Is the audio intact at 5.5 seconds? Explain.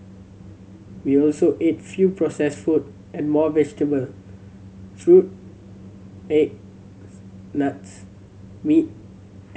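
Yes, the audio is intact at 5.5 seconds, with no audible fault at that moment.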